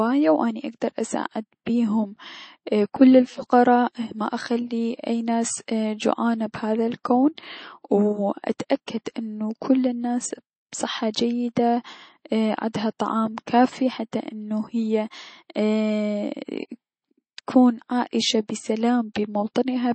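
Throughout the speech, a starved encoder, likely MP3 at a very low bitrate such as 32 kbps, has discarded everything above 8.4 kHz and switched weak frequency lines on and off between frames. That MP3 compression damage is plainly audible as dull, watery, swirling sound with chirpy sibilants.

At 8.59 s and again at 8.86 s, the codec smeared quantisation noise from a sharp attack back across its block, producing pre-echo: a short hiss about 12 to 13 ms before each onset, which blunts and softens the attack.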